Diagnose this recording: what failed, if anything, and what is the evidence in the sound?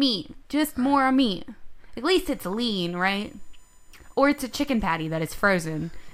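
USB bus current is leaking into the analogue wiring through shared power or ground. From 2.27 s to the end, a steady whine sits under the speech, built on 1 kHz multiples and strongest at 7 kHz, roughly 40 dB down, tracking the bus's 1 ms frame rate.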